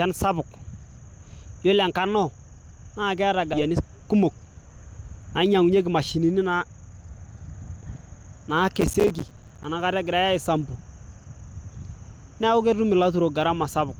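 At 3.53–3.55 s, right after "naa keeta", a skip ahead occurs. About a second of speech was discarded while later audio was already queued, so playback jumps forward with no gap. On a waveform the two sides butt together, and a spectrogram shows an abrupt change in formant pattern at the join.

Jitter buffer speed-up follows from 3.63 to 4.70 s at 112% speed, trimming roughly 150 ms, and again from 5.54 to 6.20 s at 108%, trimming about 70 ms. The receiver cut one or a few pitch periods at a time, repeatedly, to reduce its excess delay, so the speech sounds hurried but keeps its pitch. The spectrogram shows compressed syllables with unchanged harmonic spacing.

From 8.78 to 9.64 s, processor overload crackle appears. Around 40 audio buffers of roughly 5 ms each missed their deadlines and were replaced by silence, giving a gritty tearing over the speech. The waveform shows many brief dropouts with hard edges, and each shows on the spectrogram as a thin vertical broadband streak.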